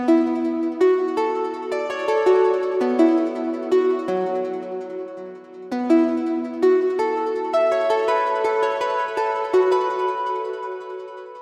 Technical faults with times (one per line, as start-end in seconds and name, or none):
none